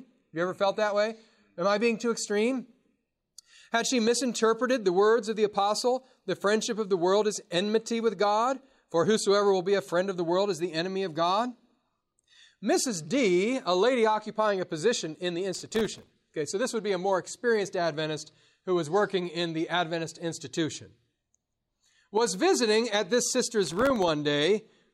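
Processor overload crackle at 15.54 to 16.13 s and again at 23.64 to 24.08 s: sub-millisecond buffers repeatedly missed their deadlines, each leaving a hard-edged silent gap, heard as gritty crackle over the speech.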